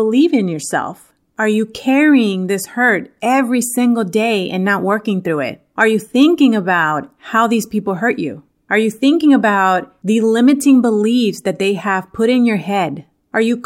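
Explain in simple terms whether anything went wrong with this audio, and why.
Nothing went wrong; the speech recording has no faults.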